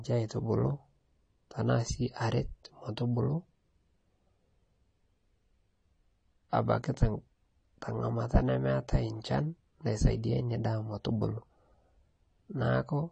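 From start to finish the speech sounds dull and smeared, with nothing above 10 kHz and a fizzy, warbling texture on sibilants. This is likely AAC compression: the coder dropped upper bands and coarsely quantised the rest, damage that points to AAC-LC at a low bitrate near 32 kbps.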